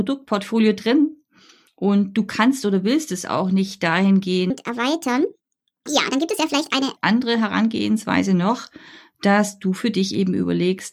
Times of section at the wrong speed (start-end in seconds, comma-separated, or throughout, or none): 4.50-6.97